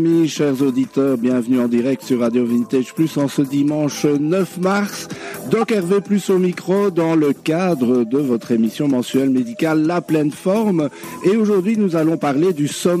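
At 5.57 s a corrupt frame is decoded: a brief chirpy blip lasting only a few compressed frames, peaking at about -25 dBFS. Damaged bits inside the frames were read as valid, so misread codes and gains placed energy at frequencies the sound never had. That spectral wrongness is what separates it from a plain click, which is broadband and instant, and from a dropout, where the audio goes missing rather than turning into strange tonal noise.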